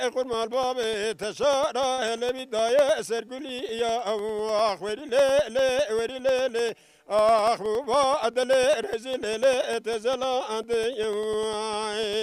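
From 0.13 s to the end of the clip there are periodic USB or driver dropouts: every 0.1 s a tiny slice of audio is lost and replaced with silence, most likely because something stalls the USB bus or the audio driver on a fixed schedule. The result is a steady ten-per-second train of ticks that can only be heard while sound is present and vanishes in quiet passages.

At 1.93 to 2.00 s a short stall from a late packet occurs. A packet failed to arrive on time, the jitter buffer emptied, and the receiver held the last bit of sound for about 46 ms until the data turned up, then resumed where it had stopped. Nothing is missing, but the sound hangs briefly with a slight buzz or dip, and everything after it runs 46 ms later.

From 7.42 to 7.96 s there is a jitter buffer speed-up. The buffer was holding more audio than its target, so the receiver cut out many short pitch-period-length pieces in a row, removing roughly 50 ms in total. 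Playback runs about 9 % fast through this stretch with the pitch unchanged, which gives a hurried, compressed feel.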